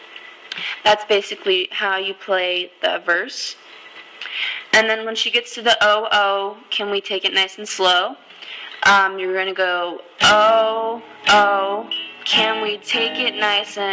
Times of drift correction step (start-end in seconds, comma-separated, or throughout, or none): none